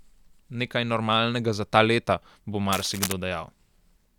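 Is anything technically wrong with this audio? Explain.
Yes. From 2.72 to 3.13 s, just after "za ta leta bo", cable scratch noise runs over the speech. It is a dense, uneven crackling rustle a little below the speech level, likely from a worn cable or connector being moved so its contact resistance fluctuated rapidly.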